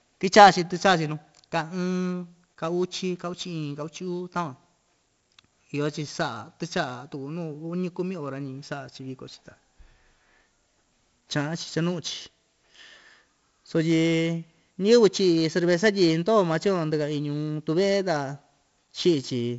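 A speech recording with 4-bit ADPCM compression from start to finish. Every loud passage carries a gritty hiss that rises and falls with the level. The damage is heavy. Sharp onsets sound distorted, because each sample is coded as a small step from a prediction and the step size cannot grow fast enough. The rate of 64 kbps fits a 16 kHz sample rate. Nothing is present above 7.7 kHz, so the sound is dull.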